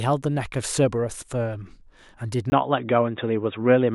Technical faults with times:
2.50-3.94 input switched to a poorer device

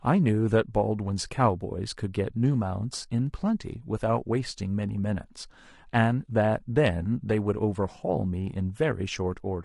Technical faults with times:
0.00-9.65 low-delay AAC compression

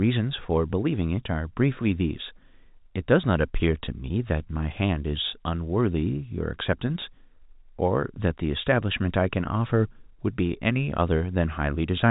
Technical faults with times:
none

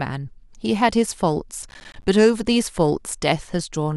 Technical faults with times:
1.63-2.04 processor overload crackle

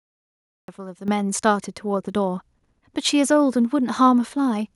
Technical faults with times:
0.00-0.68 cut-off start
1.08 microphone volume stepped up

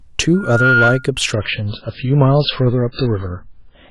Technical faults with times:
0.34-1.10 loudspeaker feedback squeal
1.33-3.91 adaptive stream at a lower bitrate

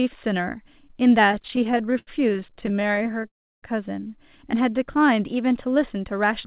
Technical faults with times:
1.32-3.26 repeated stalls (stutter)
3.28-3.65 call audio freeze
4.57-5.52 jitter buffer slow-down

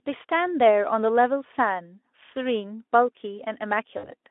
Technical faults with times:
3.97-4.13 VoIP packet loss concealed by the speech codec

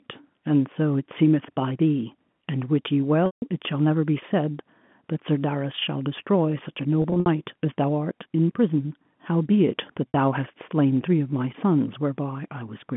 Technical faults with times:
3.26-3.42 packet loss with pitch repetition
7.02-7.26 packet loss with pitch repetition
10.12 packet loss with pitch repetition

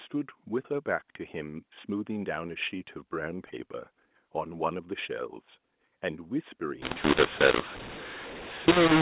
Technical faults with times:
6.82-9.02 mu-law and A-law mixed up

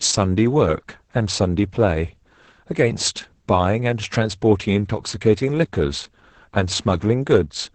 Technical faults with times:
0.00-7.75 Opus voice compression

